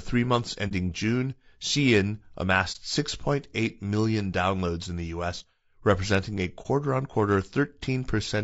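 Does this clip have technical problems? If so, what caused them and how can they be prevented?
Yes. Throughout, the speech sounds rough and grainy, with noise between the harmonics and a thin, synthetic top end. This is likely low-delay AAC compression (AAC-ELD) at a low bitrate, which fits around 32 kbps: its short frames resolve pitch harmonics poorly. Raising the bitrate would prevent it.

There are brief dips at 0.68 to 0.72 s, 2.72 to 2.77 s and 6.62 to 6.66 s. This is AAC frame loss with muting: each time, about 30 ms of audio was lost, the decoder zeroed it, and the overlapping windows faded the sound out and back in. Using packet-loss concealment or a more reliable network path would prevent these gaps.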